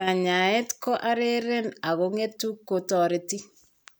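No technical faults can be heard anywhere in the speech.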